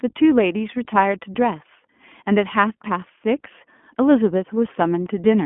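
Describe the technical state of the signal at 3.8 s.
At 3.8 s, as through the whole clip, you're hearing the iLBC codec. Each short frame, which fits 20 ms, is coded on its own, so the speech comes out plainly rough and synthetic, squeezed into a 200 Hz to 3.4 kHz band with nothing above 3.6 kHz.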